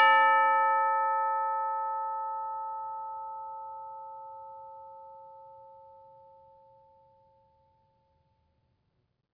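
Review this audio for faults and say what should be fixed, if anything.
No faults turn up in this music, so nothing needs to be fixed.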